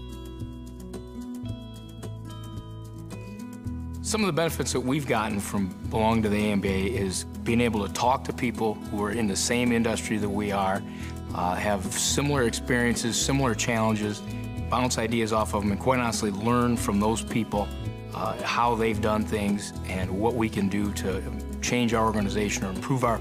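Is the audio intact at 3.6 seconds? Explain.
Yes, the audio is intact at 3.6 seconds, with no dropout, click, distortion or other fault at that point.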